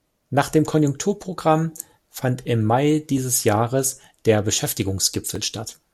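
Two devices likely running on separate clocks that disagree by roughly one part in a thousand let the buffer between them drift until a few dozen samples are dropped or repeated. This clock drift buffer slip recurs every 0.73 s from 0.27 s to 5.36 s, heard as a regular click through the speech.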